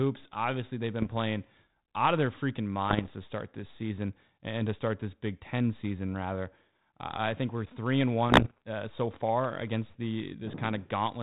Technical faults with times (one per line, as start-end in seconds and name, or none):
1.01-1.15 bit errors on an ADPCM link
2.88-3.09 bit errors on an ADPCM link
8.28-8.62 bit errors on an ADPCM link